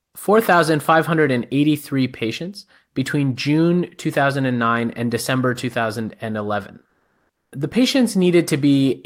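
A speech recording with comfort noise in place of the background from 6.89 to 7.51 s, a stretch of about 620 ms during a pause. There the natural room background gives way to a smooth, featureless hiss, and its level shifts by about 7 dB relative to the real background, which sits about 62 dB below the loudest speech. The likely cause is Opus discontinuous transmission: the sender stopped sending during silence, and the receiver synthesised approximate noise until speech resumed.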